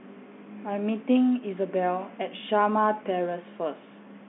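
No technical fault can be heard in the speech, which carries the ordinary telephone band from about 150 Hz to 3.5 kHz with nothing above 3.7 kHz, as expected of G.711 telephone coding, here consistent with the A-law variant at 64 kbps.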